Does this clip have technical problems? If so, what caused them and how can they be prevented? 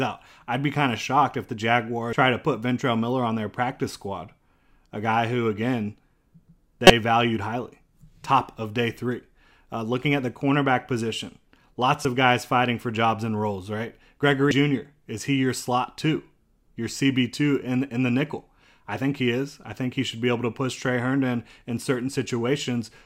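Yes. Damaged data in a compressed stream causes brief glitches at 2.13 s (after "of shocked if the"), 6.87–6.90 s (before "valued highly"), 12.03–12.05 s (after "the cornerback position lots") and 14.51 s. The decoder misreads corrupted frames and resyncs, producing a chirp, squawk, click or short hole. Checksummed, error-checked storage and transfer would prevent this.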